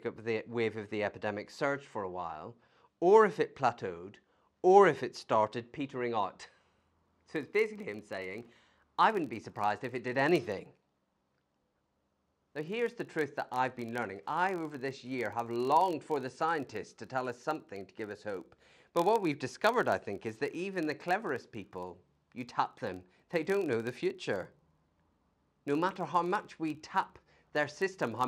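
Filter restarted on every block, from 6.76 s to the end of the clip: a filter in the chain loses its memory at each block boundary and begins again from silence, so every block opens with a small transient. Over the speech this becomes a steady buzz at about 43.1 Hz, which fits blocks of 1024 samples at 44.1 kHz. The buzz grows louder and quieter with the speech itself.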